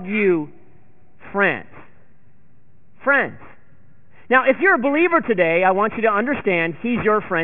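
Aliasing runs through the whole recording. Content above about 3 kHz folds back below that edge, which points to a drop to a 6 kHz rate without filtering first. Sibilants turn gritty and metallic, with false tones roughly 15 dB under the speech.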